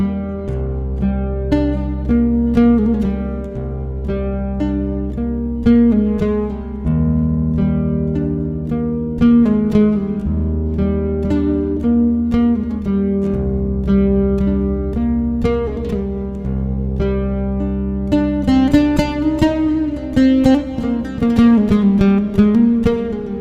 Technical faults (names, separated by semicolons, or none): adaptive stream starting at a low bitrate